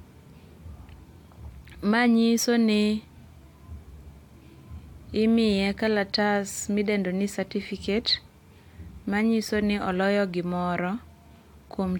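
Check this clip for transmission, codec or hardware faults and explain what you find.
One fault turns up in the speech. At 2.37 s there is damaged data in a compressed stream: a corrupted stretch of the file makes the decoder misread a frame and resync at the next header, producing a brief glitch of about 14 ms.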